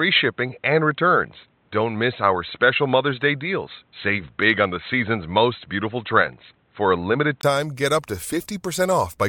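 From the start until about 7.43 s, the speech sounds dull and boxy, with nothing above 4.1 kHz and a faint added noise floor, about 45 dB down. A brief 20 ms gap comes before "get up to," where it opens up again. That's likely an input switched to a poorer device and then back.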